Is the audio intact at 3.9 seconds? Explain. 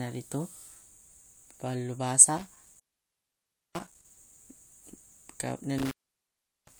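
No. From 2.37 to 4.17 s an intermittent contact breaks the speech: a loose connection opens for about 955 ms, so the signal drops out with crackle at the break edges and faint hiss beneath. That scratchy edge noise sets it apart from a clean digital dropout.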